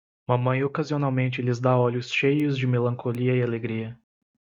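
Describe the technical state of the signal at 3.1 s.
A bit error spike occurs at 3.15 s. One stored or transmitted bit has flipped, so the value leaps by a power of two and snaps straight back. The spike reaches about -19 dBFS, brief enough to fit a single corrupted sample. It sounds like one sharp, broadband tick, unrelated to the surrounding audio.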